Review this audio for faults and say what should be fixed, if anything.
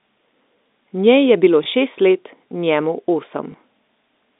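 Packet loss with last packet repeated, 1.64 to 1.66 s before "šest let njemu" and 3.52 to 3.54 s after "bilo šest let njemu": each lost 20 ms packet is filled by replaying the previous one, causing a small blip. Preventing it needs forward error correction or redundancy on the link, plus concealment that interpolates and fades rather than repeating a packet.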